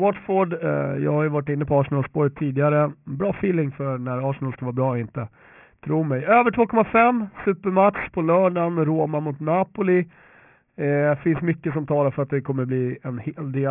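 Sibilants and the crisp edges of consonants come out gritty and metallic throughout this speech clip, with harsh, unrelated tones sitting a modest distance below the voice and the spectrum running hard up to a ceiling near 3 kHz. That is aliasing: the audio was brought down to a low sample rate, which fits a 6 kHz rate, without first removing content above 3 kHz, so those high frequencies folded back into the band as wrong pitches.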